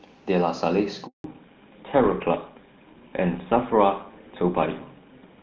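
Handover gap at 1.06 s: the call is passed from one network to another, and for about 180 ms, until 1.24 s, no speech frames reach the receiver. The speech fades out within a few tens of milliseconds and drops to silence until the new link takes over, so whatever was said in that stretch never arrives.

Fallback to narrowband from 1.24 s to the end: just after the handover, the call leaves HD Voice, whose clean, full-sounding band before the gap fits AMR-WB at its top rate, for an older narrowband codec whose character fits GSM full rate. Nothing above 4 kHz survives from this point, so sibilants and breath lose their crispness and the speech turns duller, boxier and rougher for the rest of the clip.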